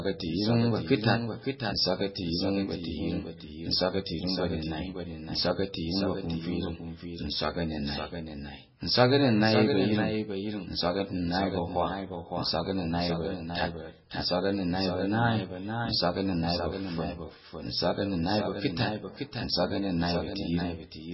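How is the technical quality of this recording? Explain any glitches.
The quality is poor, with two faults running through the whole clip.

A doubled audio track is present throughout: a second, full-band copy of the speech trails the original by about half a second, a few dB quieter, likely from a slower capture path being mixed back in. It sounds like a dry, roomless echo, and a waveform shows each burst repeated after that fixed gap.

MP3 compression is heavy throughout, likely from encoding at a very low bitrate, consistent with something around 16 kbps. Nothing remains above 5.6 kHz, so the sound is dull and watery, with swirling, smeared consonants. On a spectrogram the top is cut off flat, and flickering holes appear below.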